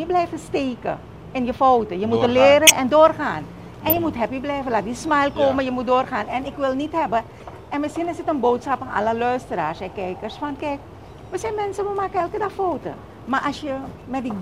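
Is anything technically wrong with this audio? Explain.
Yes. Short chirps and noise bursts at 2.67 to 2.70 s, 3.89 to 3.97 s and 7.40 to 7.45 s are corrupt frames being decoded. The first two are very loud, and the last is much fainter. Each burst lasts a few frames. Flipped bits inside those compressed frames made the decoder rebuild energy at the wrong frequencies.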